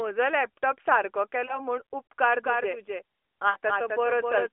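From 1.46 to 1.59 s the speech briefly dips and warbles. These are lost AMR speech frames: a corrupted stretch that fits a single 20 ms frame, which the decoder covered by reusing the previous pitch and vocal tract settings at falling gain.

From 2.24 s to the end, a second copy of the audio trails about a third of a second behind, roughly 5 dB quieter, dry and abrupt where it begins. This doubled audio track is likely from a second, slower capture path.

At 3.50 to 3.57 s the sound drags and fades before recovering. These are lost AMR speech frames again, a run that points to about three consecutive 20 ms frames. All of it is carried over the AMR-NB narrowband line, limited to 300 Hz to 3.4 kHz.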